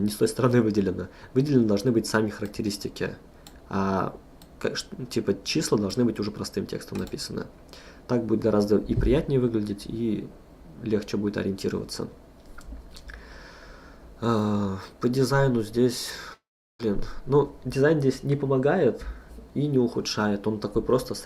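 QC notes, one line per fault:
16.33–16.80 s, long network dropout: sound smears into a fading buzz, then about 0.36 s of silence; likely lost packets, roughly half a second never recovered.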